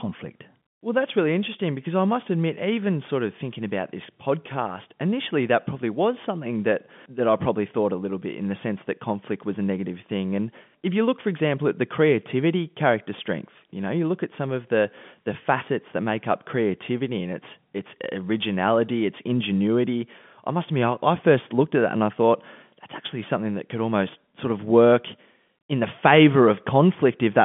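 Nothing stood out on listening to this speech as it comes over the G.711 telephone line, with its usual narrow band running up to about 3.4 kHz.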